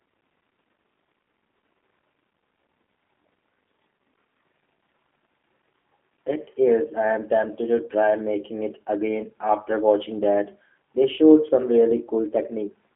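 From start to end the speech runs through a G.729 codec, likely the G.729A variant. The sound points to an 8 kbit/s stream. The band is narrow, roughly 200 Hz to 3.5 kHz. Nothing above that survives. The coder does not send the waveform. It sends a vocal tract filter, a pitch predictor and a few pulses per frame. The decoder rebuilds speech from these. The damage is plainly audible. Speech sounds rough and synthetic.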